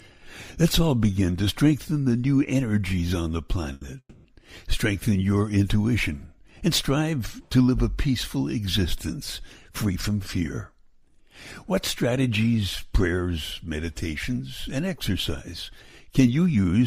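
At 3.73 s there's a short stall from a late packet: the jitter buffer ran dry, so the last sound gets held for an extra 80 ms before carrying on. Right after, from 3.99 to 4.27 s, comes a call audio freeze: the sound stretches into a fading buzz for about 250 ms, including roughly 70 ms of silence, then resumes where it left off. The likely cause is packets held up in transit. Then there's jitter buffer speed-up from 9.69 to 10.1 s, running at 110% and trimming about 50 ms, and again from 16.12 to 16.86 s at 114%, trimming around a tenth of a second. In both, the receiver cuts tiny pitch-period slices to shrink the backlog, so the audio sounds hurried at unchanged pitch.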